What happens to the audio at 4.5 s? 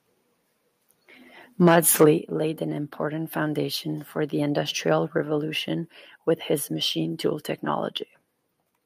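Nothing goes wrong at 4.5 s; the speech runs through that moment intact, with no dropout, click or distortion.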